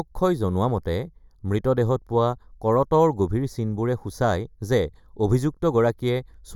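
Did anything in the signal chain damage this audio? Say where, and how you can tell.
Yes. Channel delay (comb filtering) affects the speech for the whole clip. One channel reaches the mono sum a fraction of a millisecond late, around 0.2 ms, so the content common to both channels cancels at evenly spaced frequencies, the first near 3 kHz and the next near 9 kHz. The fixed notches make the voice sound hollow and phasey throughout, which points to a stage that sums the channels to mono.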